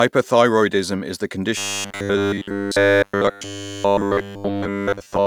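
Right after "is the", at about 1.57 s, the speech collapses into robotic sound from repeated short buffers and stays that way to the end. It's a rigid, metallic 100 Hz buzz, likely from the same 10 ms chunk being looped while fresh audio is skipped.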